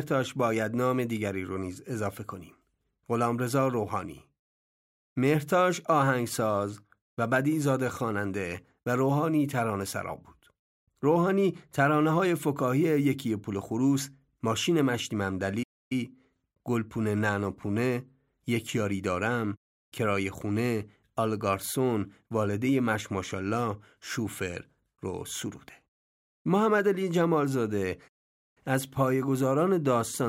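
At 15.63 s the speech drops to silence for 0.28 s before continuing, and at 28.08 s a longer 0.48 s gap occurs. Both are playback stalls, where output halts mid-flow, likely because the player ran short of data or its thread was blocked.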